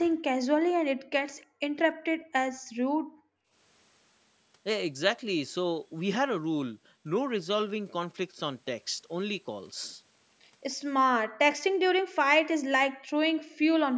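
At 0.98 s, and again at 1.46, 2.17, 2.66 to 3.52 (the longest, nearly a second), 11.25 and 12.9 s, the room sound falls by about 33 to 40 dB. This is background gated by the echo canceller, which pulls the microphone down while the loudspeaker plays.

At 1.41 s, a very faint copy of the speech arrives about 307 ms late, likely an echo leak from an incompletely cancelled loudspeaker signal.

At 12.0 s, the speech itself drops out deeply for a brief moment, probably speech suppressed in double talk.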